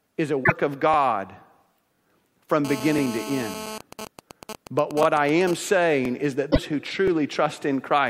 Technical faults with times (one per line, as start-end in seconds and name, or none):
0.43-0.52 broken MP3 bit reservoir
2.65-3.78 GSM phone buzz
2.98-3.01 overlapping chunks
3.81-5.54 GSM signalling bursts
5.03-5.05 overlapping chunks
6.05-6.08 overlapping chunks
6.50-6.58 broken MP3 bit reservoir
7.08-7.10 overlapping chunks